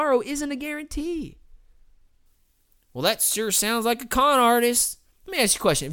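From 2.26 s to the end of the speech, pre-emphasis is left on. The treble lift applied ahead of recording or transmission was never undone by the matching de-emphasis, so high frequencies stay raised by about 10 dB at 10 kHz relative to 1 kHz. The rising shape fits the FM 50 µs curve. The result is thin and overly bright, with sibilants hissing and cutting forward against a lightweight low end.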